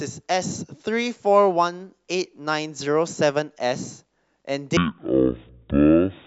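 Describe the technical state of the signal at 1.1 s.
The signal at 1.1 s is intact, with no audible fault at that moment.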